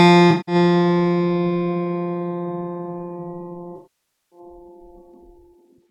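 AAC frame loss with concealment hits this music at 0.30 to 0.55 s and 3.76 to 4.39 s. The decoder rebuilt the missing stretches from the last good spectrum, leaving smeared, phasey patches.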